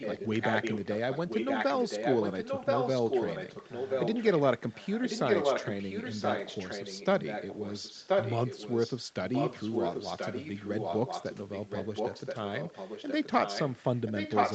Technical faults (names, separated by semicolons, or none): echo leak